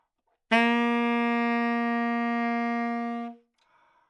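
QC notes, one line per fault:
Nothing stood out on listening to this recording of sounds.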